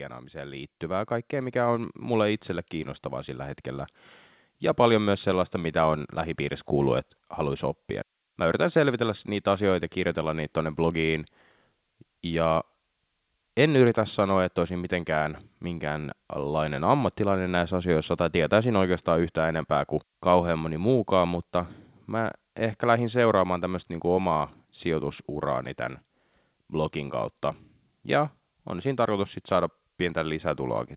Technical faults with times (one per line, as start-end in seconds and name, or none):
0.00-30.96 switching supply whistle
0.33-6.72 automatic gain rising